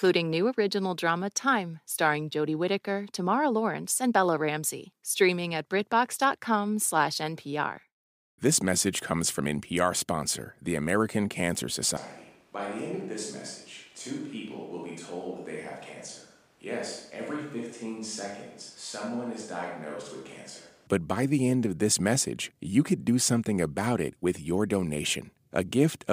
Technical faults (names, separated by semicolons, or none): switch to a distant microphone